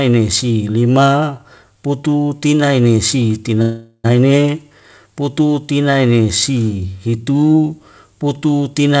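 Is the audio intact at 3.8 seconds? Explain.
No. A call audio freeze runs from 3.62 to 4.06 s, likely because packets arrived late and the jitter buffer emptied. The last sound stretches into a fading buzz or hiss with 50 ms of silence, then the audio resumes where it stopped, 421 ms late.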